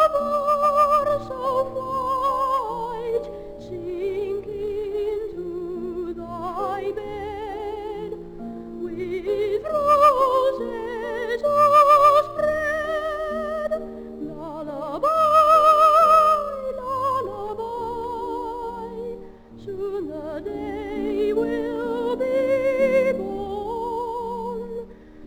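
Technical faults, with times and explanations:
throughout: crude rate conversion. Dropped samples, consistent with a 48 kHz to 44.1 kHz change, leave an inharmonic fizz roughly 30 dB down that follows loud, bright passages, unlike steady hiss.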